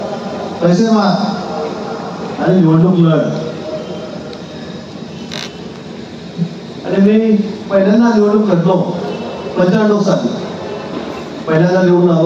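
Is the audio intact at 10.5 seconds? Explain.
No. Gain pumping runs throughout, including 10.5 s: the gain swings by about 10 dB, likely from excessive input gain driving a fast limiter.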